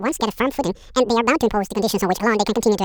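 Throughout the speech, the audio was read two samples at a time (double speed): the reader treated each pair of samples as a single frame, as if the data were stereo or twice as wide. Playback therefore runs at 2x, a full 12 semitones higher.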